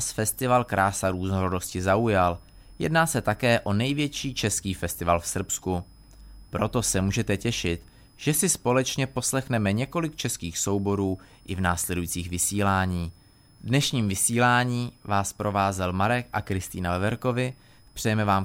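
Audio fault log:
Throughout: switching supply whistle, a faint high tone wandering between about 5.01 and 5.25 kHz, roughly 40 dB below the speech. A switching power supply is running in an audible burst mode or beating with another one, and its frequency drifts as load shifts.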